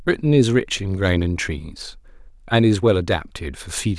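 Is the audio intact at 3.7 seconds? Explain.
Yes, at 3.7 seconds the speech is intact, with no audible dropout, glitch or other fault at that moment.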